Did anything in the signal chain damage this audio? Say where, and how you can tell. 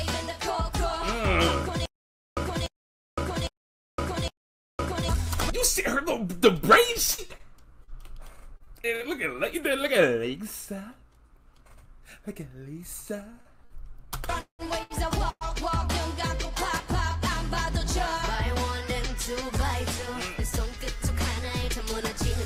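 Yes. From 1.86 to 5.09 s a 295 ms burst of sound repeats four times at an even 808 ms period, each time followed by about 513 ms of dead digital silence. This is stutter with silent gaps, likely a playback or stream stall that replayed its last fragment on each retry, so the intervening audio is lost.

Between 6.87 and 9.38 s the sound turns choppy, with about a dozen brief holes, the longest 61 ms. This is repeated packet loss (robotic sound) on the network: each missing piece is patched by extending the previous sound, and roughly 240 ms of audio is gone.

From 13.41 to 15.44 s the audio drags and stutters through five stalls, the longest 182 ms, where the last sound is held, and faded in the longer waits. These are repeated stalls (stutter): late packets emptied the jitter buffer, and the receiver filled each wait without losing any audio.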